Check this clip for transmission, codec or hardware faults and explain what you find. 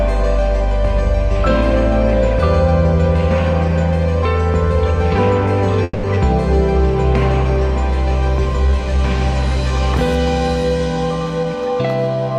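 Two transmission faults sit close together around the middle of the clip: a call audio freeze, followed almost at once by a skip ahead.

Call audio freeze, 5.83 to 6.06 s. The most likely cause is that incoming packets stalled and the jitter buffer ran dry, so the receiver kept extending the last sound for about 200 ms. That stretch is heard as a fading buzz or hiss continuing the last sound rather than silence. When audio resumes it picks up exactly where it stopped, so nothing is lost, but playback now runs about 200 ms later.

Skip ahead, 6.15 to 6.19 s. Here a short run of audio, roughly 70 ms, was dropped while later material was already queued, probably as the buffer shed its backlog after the stall. Only about 10 ms of fill bridges the join, so the sound jumps forward almost seamlessly and a small piece is simply absent. The jump also removes part of the delay added by the freeze.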